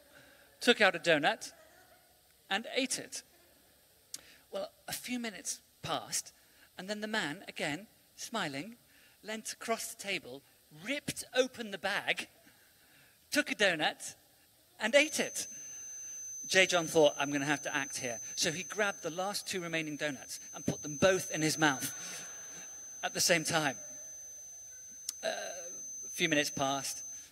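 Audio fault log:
14.90–27.32 s, feedback whistle: a thin, steady tone at 6.2 kHz sits behind the sound to the end, swelling and fading slowly in level, about 15 dB below it. Likely a loudspeaker-to-microphone loop held just short of runaway feedback, sustaining that single frequency.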